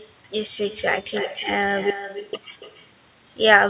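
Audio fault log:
Throughout: echo with no canceller. Every phrase is followed roughly a third of a second later by a quieter copy, about 11 dB down, and thinner. That fixed lag and the far-end loudspeaker colouring set it apart from natural room reverberation, which smears continuously rather than repeating.
1.90 to 2.33 s: audio dropout to silence. The sound stops dead for 0.43 s and resumes mid-flow. The gap is silent with no room tone. The likely cause is a lost input feeding silence to the recorder.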